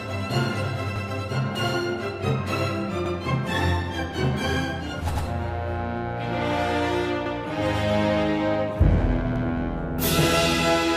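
A short stutter recurs at regular intervals, at 0.96, 3.06, 5.16, 7.26 and 9.36 s, where a 100 ms stretch of sound plays twice. These are overlapping chunks: the audio was handled in 2-second blocks, each starting 100 ms before the previous one ended.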